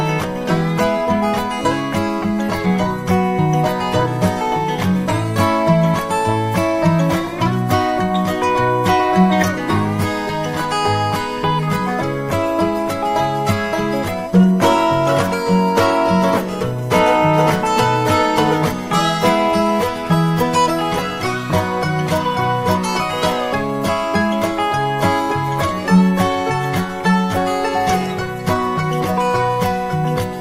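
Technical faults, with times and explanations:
Throughout, USB whine: a steady tone sits at 1 kHz, about 25 dB below the programme, and never shifts in pitch. The bus powering the interface draws current in regular 1 ms frames, and that pulsing leaks into the analogue path through the shared power or ground, producing a fixed 1 kHz whine. On a spectrogram it appears as a thin, unbroken horizontal line at 1 kHz across the whole clip.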